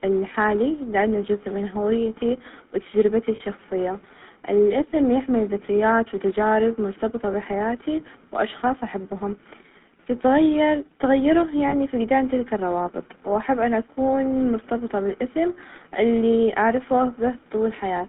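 Throughout, the GSM full-rate codec gives a buzzy, gravelly roughness. The spectrogram shows energy confined to about 150 Hz to 3.6 kHz with a coarse harmonic texture. This fits 13 kbps GSM.

At 3.36 s and again at 11.68 s come lost GSM frames. Each gap is about 40 ms, consistent with two 20 ms frames. The previous frame's settings are repeated, producing a brief metallic ring that appears as smeared, held spectral bands.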